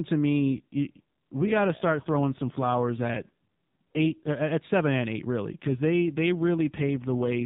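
An AMR rate drop happens twice: from 0.40 to 4.32 s, just before "at seven and eight", and from 5.52 s, after "seven and eight really", to 7.45 s. Each step down, which fits 12.2 falling to 5.9 kbps, makes the speech buzzier and more synthetic, with no gap or change of band.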